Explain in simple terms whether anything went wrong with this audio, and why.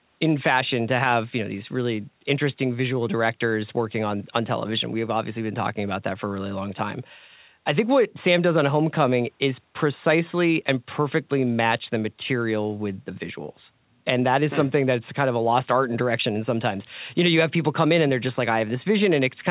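Nothing went wrong with this audio; it sounds the way speech normally does after passing through a call's microphone processing and phone-quality codec.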